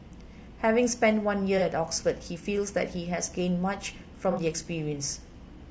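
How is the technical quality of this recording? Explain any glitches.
The recording carries plainly audible codec damage for its whole length, plus two brief concealed dropouts.

Throughout, the speech sounds rough and grainy, with noise filling the gaps between harmonics and a thin, synthetic-sounding top band. This is likely low-delay AAC compression (AAC-ELD) at a low rate, around 32 kbps. Its short frames resolve pitch harmonics poorly and leave too few bits for the upper band.

The AAC frame loss with concealment occurs at 1.58–1.62 s and 4.31–4.39 s, consistent with one and two lost frames. The decoder bridges each gap by reusing the last good spectrum, so both spots sound like a smeared, noisy or phasey patch. The second is longer.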